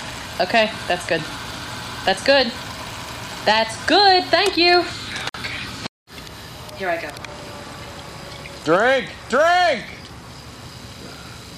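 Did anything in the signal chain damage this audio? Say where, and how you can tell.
Yes. The damage happened at the codec stage, where the audio was encoded in separate pieces and joined without trimming. This left a gap at a join of encoded pieces at 5.29 to 5.34 s, a break of about 49 ms in otherwise continuous sound. Each encoder pass adds silence for its start-up delay and pads its final frame, so both remain at the seam. The codec softens the gap's edges, and afterward the sound resumes where it left off.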